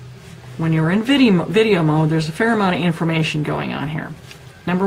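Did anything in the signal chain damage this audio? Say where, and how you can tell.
Yes: a call bitrate drop from 2.84 s to 4.23 s, rooted in the network and showing up in the codec. The audio turns rough and watery, and the top end dulls, holding its poorest state for about 1.3 s before recovering. That fits the call's bandwidth estimate falling and the encoder being throttled from around 64 kbps to 24 kbps, which forces coarser quantisation and a narrower coded bandwidth until the rate climbs back.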